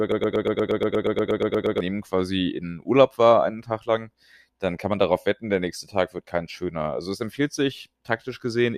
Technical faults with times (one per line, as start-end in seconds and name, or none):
0.00-1.80 broken-record loop